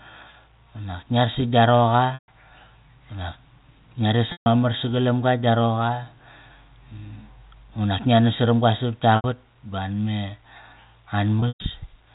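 Packet loss with pitch repetition hits this telephone-band speech at 2.14–2.28, 4.32–4.46, 9.16–9.24 and 11.40–11.64 s, where the receiver loops the last pitch period into a brief buzzy hold that fades toward silence.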